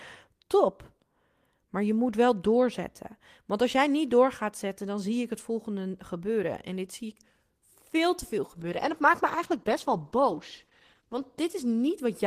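From 8.61 s to the end of the clip, the speech turns rough and muffled, worst for about 2.45 s. This is a call bitrate drop: the encoder was told to use far fewer bits, coding more coarsely and losing the high frequencies, which fits a fall from about 32 to 13 kbps.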